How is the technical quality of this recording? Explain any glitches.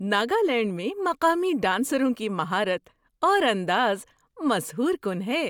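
No glitches or technical faults.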